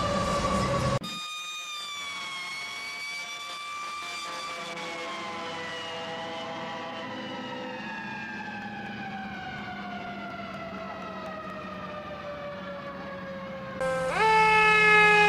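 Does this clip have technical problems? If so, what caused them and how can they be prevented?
Yes. From 8.38 to 11.74 s there are periodic USB or driver dropouts. Every 0.24 s something stalls the audio path and around 10 ms of sound is skipped outright, leaving about fifteen evenly spaced ticks. A spectrogram shows thin vertical broadband streaks at that regular spacing, and the waveform shows abrupt splices where the signal jumps. Prevent this by giving the audio interface its own USB controller, disabling power saving and polling background tasks, and raising the driver buffer size.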